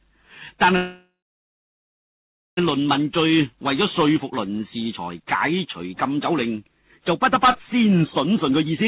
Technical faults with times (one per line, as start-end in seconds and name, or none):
0.76-2.59 call audio freeze
8.31-8.85 jitter buffer speed-up